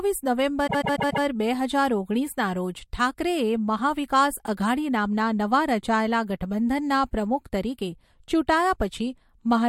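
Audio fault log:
0.66–1.24 s, repeated frames: a 144 ms block of speech plays four extra times before "બે હજાર ઓગણીસના રોજ", which fits a run of about six compressed frames sent repeatedly. The result is a stuttering loop, and it adds 576 ms to the clip.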